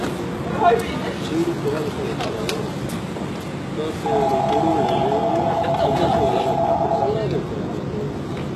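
Throughout, the system likely applied heavy HE-AAC compression at a rate fitting about 16 kbps. Only the lower spectrum is coded, and the treble is rebuilt from copied lower bands. The top end sounds gritty and metallic, with nothing above 12.3 kHz.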